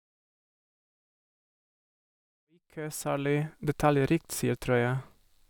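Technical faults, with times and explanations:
No technical faults can be heard anywhere here.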